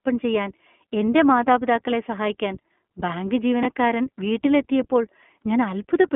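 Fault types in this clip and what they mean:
iLBC codec: The whole recording passes through a narrowband voice codec that codes each 20 ms frame on its own. The speech sounds plainly rough and slightly synthetic, which fits iLBC's 15.2 kbps mode. Energy sits between about 200 Hz and 3.4 kHz, so a spectrogram shows a hard ceiling with nothing above it, a thin floor below 200 Hz, and smeared, blocky harmonics. The waveform looks normal in level but loses fine detail.
Chunks out of order: At 3.63 to 3.65 s, a 10 ms chunk of audio plays one chunk late, after the chunk that should have followed it. No audio is lost, but the reordered stretch comes out as a brief jumbled blip. On the waveform there are three abrupt discontinuities, where the edges of the swapped chunks fail to line up. A spectrogram shows thin vertical broadband streaks at those joins, with harmonics briefly stepping out of sequence.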